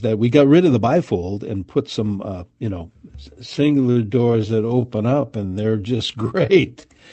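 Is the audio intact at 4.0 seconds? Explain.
No. From 3.15 s, right after "some uh you know", to the end, the audio sounds slowed and drags, while its pitch stays put. This is a time-stretched section, likely played at about 0.7 times speed, with short pieces repeated to lengthen it without lowering the pitch.

Just before 4.0 s, from 3.91 to 3.97 s, a sound is held too long with a slight buzz or dip. This is a short stall from a late packet: the jitter buffer ran dry and the receiver stretched the last sound for 41 ms until the packet arrived, so nothing was lost.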